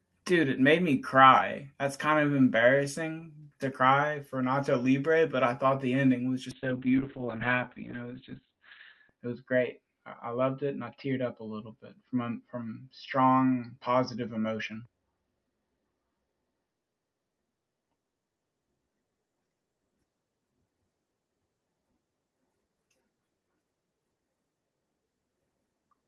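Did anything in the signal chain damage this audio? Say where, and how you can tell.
Yes. The damage is at the codec stage, driven by the call's bandwidth estimate: a call bitrate drop beginning at 6.53 s, just after "thought the ending was", and lasting to the end of the clip. The speech loses its top end, with bandwidth falling from 20 kHz to 4 kHz, and turns coarse and muffled. This fits the encoder being throttled from 32 kbps to 6 kbps, with the lowest rate held for about 2.55 s.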